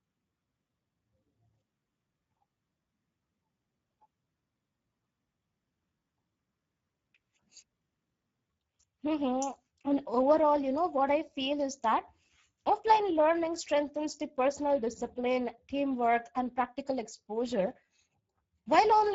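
Speech runs through the Speex codec from start to finish, with plainly audible coding damage. The voice sounds hoarse, grainy and somewhat buzzy, as the CELP coder has too few bits to model the excitation cleanly, a sound that fits a low setting around 10 kbps. On a spectrogram, harmonics look smeared and noisy rather than crisp. Everything stops at about 7.6 kHz, and the band above 4 kHz shows diffuse, noise-like fill instead of clear harmonic structure.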